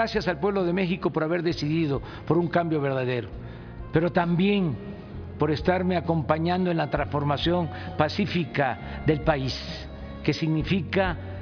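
No faults to report: nothing audible is wrong anywhere in the audio.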